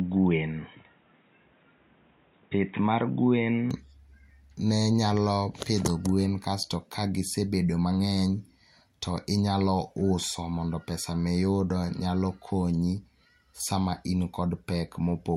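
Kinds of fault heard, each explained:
Input switched to a poorer device: the opening 3.7 s sound dull and boxy, with nothing above 3.8 kHz and a faint new noise floor, likely from a changed microphone.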